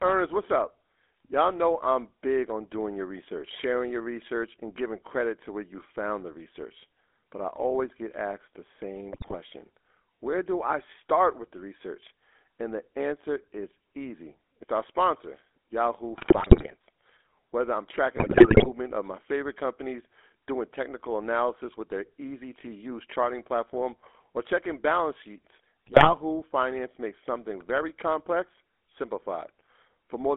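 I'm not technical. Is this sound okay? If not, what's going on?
No, not quite. The whole recording has come through the GSM full-rate codec, the compression used by early digital mobile phones. It rebuilds the speech from a rough model of the throat driven by evenly spaced pulses, so the voice picks up a buzzy, gravelly edge throughout. The sound is also squeezed into a narrow phone band, roughly 300 Hz to 3.6 kHz, so the low warmth and the crisp top end are both missing.

On top of that there are four bursts of GSM bit errors, the kind you'd hear on a weak phone signal. Corrupted data reaches the decoder, so for a brief moment it rebuilds the sound wrongly and you get squawks, pops or a gargling noise. The first runs from 9.12 to 9.35 s, right after "always get asked the", and the second from 16.18 to 16.75 s. The third is from 18.16 to 18.70 s, just before "of my favorite companies", and the last from 25.86 to 26.11 s, after "or checking balance sheets".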